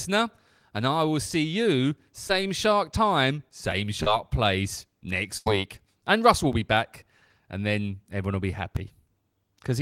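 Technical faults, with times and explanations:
2.27 to 2.31 s and 4.03 to 4.13 s, short concealed packet loss: at each point about 20 ms of the stream arrived too late or not at all. The receiver extended the preceding sound to bridge the gap, 18 ms at the first point and 29 ms at the second, where 9 ms was also trimmed to stay in step. Each gap is heard as a brief smear or wobble.
5.37 to 5.48 s, burst of packet loss: about 80 ms of consecutive audio was lost. The decoder filled 88 ms by continuing the last sound and fading it down, which produces a held, decaying buzz or hiss. The audio then resumes further along, and the lost stretch is absent.
6.53 s and 8.77 s, dropped buffer (overrun): at each point the audio jumps ahead with no silence. About 5 ms is missing at the first and about 3 ms at the second. The likely cause is that the capture side read its buffer too late and lost that block, so the two sides of the gap are joined directly.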